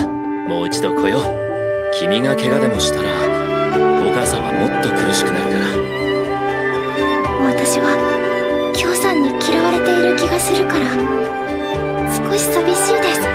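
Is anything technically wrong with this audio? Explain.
No, nothing is technically wrong with this audio.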